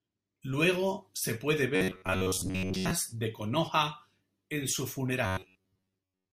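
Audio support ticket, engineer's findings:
Robotic sound from repeated short buffers, 1.76–2.91 s and 5.26 s to end. Rigid metallic buzz fixed at 93.8 Hz, speech contour only loosely followed. Likely playback buffer starvation, with an ~11 ms block looped and most real audio skipped. Constant pitch without silent gaps rules out plain dropouts.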